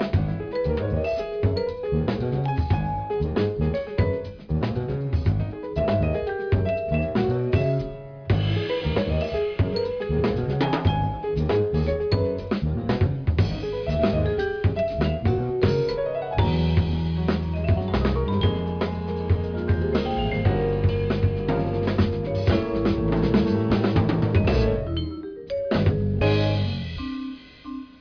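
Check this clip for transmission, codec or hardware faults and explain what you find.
Nothing stood out on listening to this clip.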